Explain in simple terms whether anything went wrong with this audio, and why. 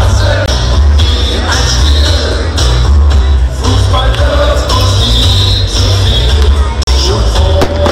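The sound cuts out twice, at about 0.46 s for 20 ms and at 6.83 s for 40 ms, then picks up as if it had kept going. This is likely a Bluetooth dropout. Some audio data, probably one packet and then two, reached the headphones too late and was skipped.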